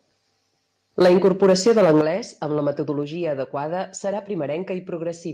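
From 1.0 to 2.01 s the speech peaks are flattened with a harsh crackle, likely microphone overload: input about 5 dB too hot, with roughly a tenth of samples cut at the converter ceiling. Microphone volume stepped down is likely behind abrupt level drops at 1.02 s (about 2 dB), 2.01 s before "amb la" (about 8 dB), and 3.03 s between "amb la" and "adequada serà" (about 3 dB).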